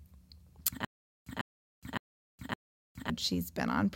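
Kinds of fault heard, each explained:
Stutter with silent gaps: playback likely stalled and replayed its last fragment at each retry before running dry, so one 146 ms burst of speech recurs four times, each followed by 416 ms of digital silence, every 563 ms from 0.85 to 3.10 s, losing the audio in between.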